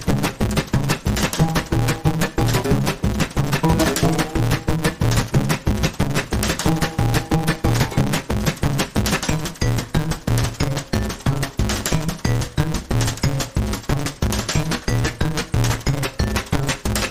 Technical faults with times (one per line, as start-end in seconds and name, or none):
0.00-17.10 block size mismatch (truncated)